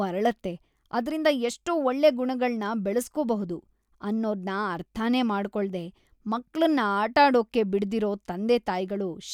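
Nothing in this speech recording stands out as a technical fault; there's no dropout, glitch or distortion anywhere in it to point to.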